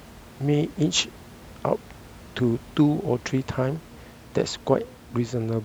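Nothing stood out on listening to this speech clip beyond a low room noise sitting about 22 dB below the speech.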